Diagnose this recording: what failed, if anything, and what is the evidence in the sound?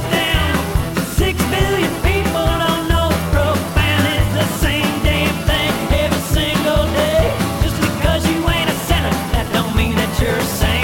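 The converter's clock is the culprit: sample clock jitter runs through the whole recording, timing wobble on the order of ten microseconds. Each sample lands early or late, and the error scales with waveform slope, so a hiss around 20 dB down tracks loud, bright passages and disappears in quiet gaps.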